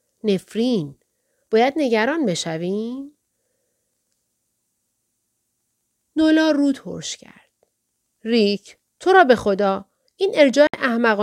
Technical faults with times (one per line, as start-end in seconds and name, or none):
10.67-10.74 digital broadcast dropout